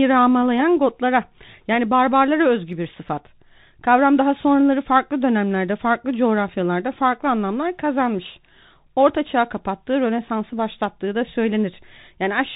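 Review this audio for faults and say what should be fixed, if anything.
The speech passed through a Bluetooth CVSD headset codec for its whole length, which fits a 64 kbps CVSD link. That codec sends one bit per sample to say whether the signal rises or falls, adapting the step size as it goes, and it discards everything above 4 kHz. The result is plainly audible: the speech sounds narrow and muffled, s sounds come out scratchy, louder bright passages smear where the steps can't keep up, and a granular hiss sits underneath throughout. Recording through a wired microphone, or a Bluetooth headset using a wideband codec such as mSBC or LC3, would prevent it.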